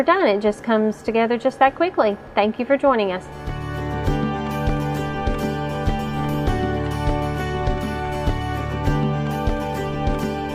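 Nothing in this audio stands out as a technical fault; it just rolls along without any glitches, dropouts or odd artefacts catching the ear.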